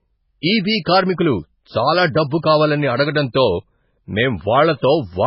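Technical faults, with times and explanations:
Throughout: MP3 compression. The speech has nothing above about 5.5 kHz and carries heavy watery, swirling damage. This fits a very low bitrate near 16 kbps. The likely cause is an MP3 encoder that, starved of bits, cut the treble at a fixed frequency and zeroed weak frequency lines, which flicker between frames.
0.85 s: pre-echo. A hiss of about 16 ms comes just before "కార్మికులు చాలా", softening that onset. The encoder spread quantisation noise across a whole block, so noise sized for the loud attack also filled the quiet moment before it.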